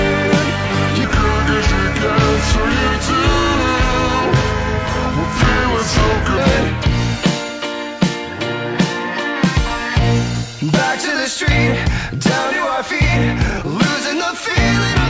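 A wrong sample rate fault runs from 1.04 to 6.38 s. Samples captured at one rate are played back at a slower one with no conversion, so everything runs at 0.726 times normal speed and drops about 5.55 semitones in pitch, the two shifting together. The sound turns low, heavy and dragged out for that stretch. The ratio fits material recorded at 22 kHz being played out at 16 kHz.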